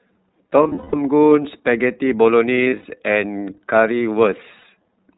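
Throughout, the speech carries the iLBC codec's narrowband sound: nothing above 4 kHz, with a slightly rough, synthetic edge. The damage is plainly audible and fits the 30 ms frame, 13.33 kbps mode, in which each frame's excitation is coded independently.

Lost iLBC frames appear at 0.63 to 0.95 s, 2.55 to 2.86 s, and 4.58 to 4.65 s. The decoder fills each gap by repeating the last pitch cycle mixed with noise, producing a held, buzzy vowel. The longest unbroken stretch, in the first burst, lasts about a fifth of a second. Because the frames are self-contained, the speech recovers immediately after each gap.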